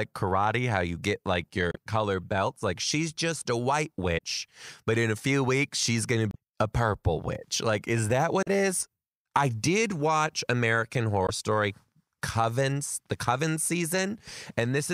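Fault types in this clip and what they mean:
Damaged data in a compressed stream: corrupted bytes make the decoder misread frames and hunt for the next valid header. Five brief glitches of 30 to 50 ms occur about every two seconds, 1.71 to 11.26 s.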